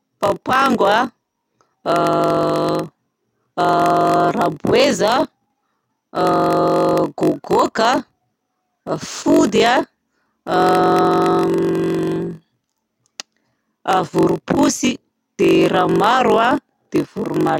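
All the way through, there's a block size mismatch (padded): short blocks zero-filled to fit a 1024-sample read, so a 46.9 Hz buzz rides along and the speech plays at 0.938 speed, timbre unchanged.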